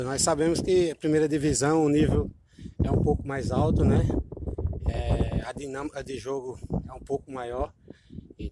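Listening through the audio, nothing stood out as a technical problem at any point.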